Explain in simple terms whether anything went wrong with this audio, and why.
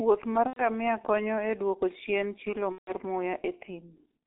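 The whole recording went through the G.723.1 codec, an old internet-phone format. It keeps only a narrow phone band, roughly 300 Hz to 3.6 kHz, and squeezes the voice hard. So the speech sounds muffled and hoarse, and consonants blur together.

There are also two moments of VoIP packet loss concealed by the speech codec, at 0.47 to 0.63 s and at 2.72 to 2.94 s. Pieces of the call went missing, about 90 ms and then about 150 ms. The decoder filled each gap by stretching the last bit of voice into a fading buzz or noise, and the speech stays weak briefly afterwards.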